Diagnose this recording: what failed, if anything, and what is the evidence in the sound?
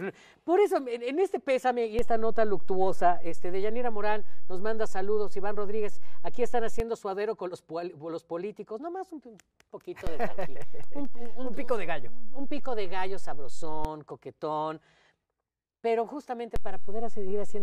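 The converter's zero reference is failing. Three DC steps shift the whole waveform off centre by about -18 dBFS from 1.99 to 6.80 s, about -19 dBFS from 10.07 to 13.85 s, and about -18 dBFS again from 16.56 s to the end. Each jump lands as a low thump or click, while the program riding on top carries on unchanged. This fits an offset being switched in and then released, such as a recalibrating input.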